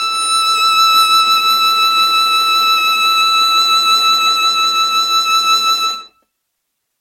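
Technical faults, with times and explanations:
Throughout, generation loss: the music sounds swirly, smeared and hollow, with blurred attacks and nothing above 16.3 kHz. It was likely decoded and re-encoded about five times as MP3. The damage points to roughly 64 kbit/s, each pass adding fresh quantisation noise and spectral holes.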